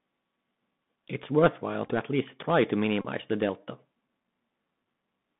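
Throughout the speech there is a thin, boxed-in tone with nothing above about 3.6 kHz and little below 150 Hz. A grainy hiss sits under it, and sibilants turn scratchy and rough. Loud, bright moments distort audibly. This is the Bluetooth CVSD headset codec. It codes the signal as one up-or-down bit per sample at 64 kbps with an adapting step size, so fast high-frequency movement outruns the step and leaves plainly audible coding damage.

From 1.86 to 1.91 s a short patch of brief ticks and short buzzy bursts breaks into the sound. A Bluetooth headset packet repeated several times here. About 26 ms of audio was lost, scattered across roughly 45 ms in short runs of no more than about 7 ms, and each gap was filled by decoding the previous packet again. From 3.02 to 3.06 s a steadier buzz near 267 Hz takes over. That comes from a run of repeated packets totalling 30 ms, one repeat every 3.75 ms, until clean packets resume.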